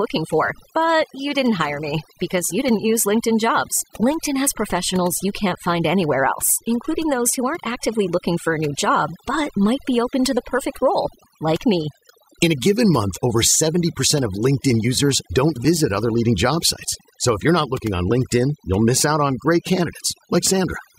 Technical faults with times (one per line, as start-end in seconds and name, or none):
0.00-20.99 overdone noise removal